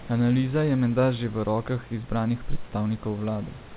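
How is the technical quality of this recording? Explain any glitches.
The speech comes through a G.711 mu-law call path at 64 kbps, which leaves nothing above 4 kHz, over room noise about 25 dB below the speech, and there are no glitches to explain.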